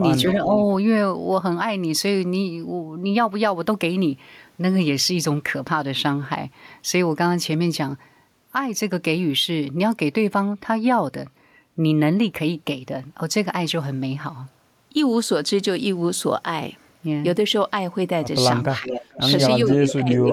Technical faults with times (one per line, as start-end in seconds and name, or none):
0.32-0.50 speech suppressed in double talk
0.57-0.63 echo leak
18.79-18.92 speech suppressed in double talk
18.88-19.20 echo leak
19.69-19.94 echo leak
19.78-20.33 speech suppressed in double talk